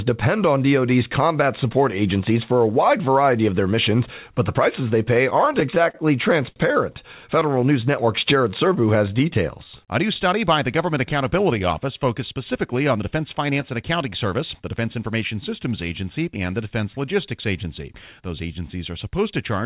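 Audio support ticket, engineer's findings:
Repeated stalls (stutter), 5.3–6.58 s, just after "the prices they pay". Six stalls totaling 140 ms, longest 59 ms, about 11% of the span. Jitter buffer starving on late packets, so the last sound is extended. Waveform shows stretched, repeating cycles with the longer ones fading. Spectrogram shows smeared horizontal bands. Nothing lost, just dragged.

Scattered short gaps, 7.40–8.78 s. Roughly five tiny holes, each about 10 ms or less, around 40 ms in all. Isolated late or lost packets patched by continuing the last sound. Audible as brief ticks or hiccups. Spectrogram shows thin vertical seams. Waveform shows small repeated-cycle splices.

Jitter buffer slow-down, 7.46–10.08 s, ending before "study by the". Playback at 94% speed, 156 ms added by repeating single pitch periods to rebuild the buffer reserve. Pitch is unchanged and sounds are drawn out. 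Waveform shows duplicated periods. Spectrogram shows stretched harmonics.

Jitter buffer speed-up, 12.19–15.22 s. Playback at 106% speed, with roughly 200 ms cut out as short pitch-period chunks to shed excess buffer delay. Pitch is unchanged and the audio sounds hurried. Waveform shows compressed syllable spacing. Spectrogram shows harmonics shortened in time, without any frequency shift.

Band limit at 4 kHz, with nothing above it, which fits a G.711 mu-law call path at 64 kbps.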